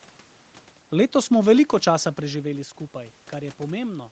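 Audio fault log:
The speech signal has no system faults: its content stops at 8 kHz with the lowest bass trimmed, as expected from call microphone processing, the background room noise belongs to the recording, and the level change around 2 seconds comes from the talker moving relative to the microphone.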